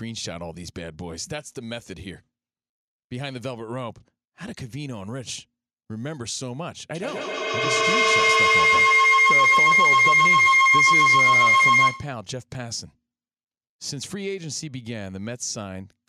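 At 6.95 s a feedback howl begins. Two devices in the same room are joined to one call, so the path from microphone to loudspeaker and back to the microphone returns more level than it sends each time round. Rather than decaying, the repeats accumulate and narrow to a tone around 2 kHz, with the loop cycling roughly every 150 ms. It peaks about 14 dB above the speech and stops at 12.25 s.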